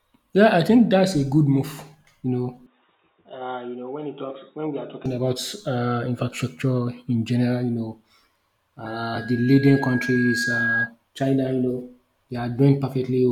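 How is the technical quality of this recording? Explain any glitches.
Two glitches affect the speech: a stretch of dull, band-limited sound and, later, a feedback squeal.

From 2.66 to 5.06 s, the sound turns boxy and drops about 5 dB, with a faint new noise floor roughly 40 dB down. There is no gap at either edge. The likely cause is an input switched to a poorer device with a narrower passband. On a spectrogram, everything above 3.8 kHz is cut off sharply, and the waveform shrinks slightly.

From 8.86 to 10.92 s, a loudspeaker feedback squeal appears. The microphone re-captures its own loudspeaker output, and at 1.6 kHz the loop gain exceeds one, so that tone builds over about 2 s until it is roughly as loud as the speech. A spectrogram shows a single bright horizontal line thickening at 1.6 kHz.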